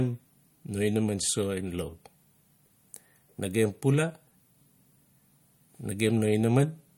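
Throughout the speech, the sound has plainly audible codec damage consistent with MP3 compression, likely at a low bitrate near 49 kbps. Nothing remains above 17.3 kHz, and weak spectral lines dropping in and out between frames give a watery, swirly texture with smeared consonant attacks.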